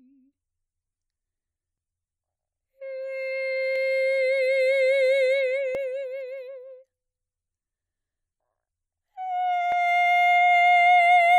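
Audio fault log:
1.78 s, 3.76–3.78 s, 5.75 s and 9.72 s: overlap between stream segments. The music is carried in 2-second segments whose time stamps overlap at these joins. The player trims the overlap as if it were doubled, but that sound was not repeated. Between about 5 and 20 milliseconds of music vanish each time. The waveform jumps across the gap. Each one is heard as a short click or tiny skip, spaced at multiples of 2 seconds.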